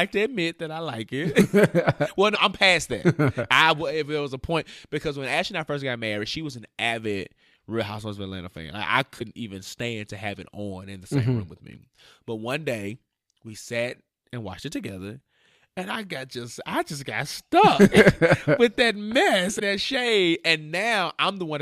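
At 2.34, 9.18 and 19.58 s, speech skips forward with a 30 ms glitch, likely a broken MP3 bit reservoir after dropped 26 ms frames; spectrograms show abrupt vertical discontinuities.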